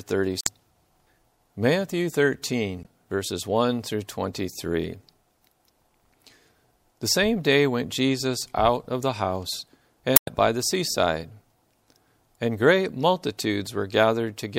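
At 0.41 to 0.49 s, 2.82 to 2.87 s and 10.13 to 10.29 s, the speech is broken by damaged data in a compressed stream. Bytes in the encoded file were lost or overwritten at these points. The decoder misreads those frames and loses sync. It then hunts for the next valid frame header. Each event sounds like a brief chirp, squawk, click or short hole. The last one is the longest, at about 0.16 s.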